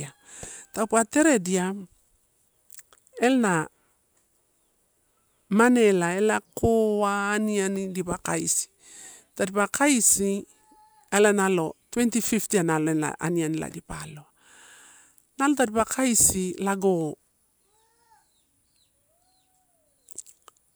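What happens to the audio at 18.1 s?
Nothing goes wrong at 18.1 s; the speech carries on intact through that moment, with no dropout, click or distortion.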